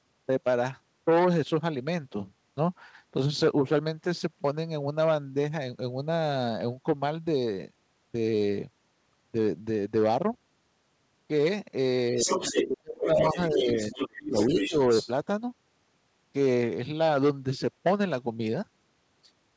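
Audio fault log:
12.11–13.38 s and 13.54–14.76 s: speech suppressed in double talk. The talker's level drops by about 30 dB and then about 25 dB, in patches totalling roughly a second and under a second, while another voice overlaps. The likely cause is the echo canceller failing to separate the two and turning both down. On the spectrogram the talker's harmonic bands fade or break into gaps. On the waveform the envelope collapses in chunks.
12.2–12.68 s, 13.05–13.1 s, 13.32–14.08 s and 14.25–15.11 s: other side's voice leaking through. A second voice appears in bursts, about 5 dB below the talker at first and about 10 dB below later. It is likely loudspeaker echo that was not fully cancelled. The spectrogram shows a second set of harmonic stripes, cut off at 8 kHz like the rest of the band, overlapping or filling the talker's gaps.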